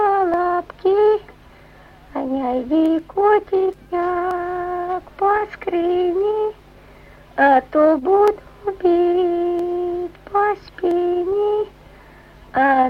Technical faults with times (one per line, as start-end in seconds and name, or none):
0.34-12.23 clock drift buffer slips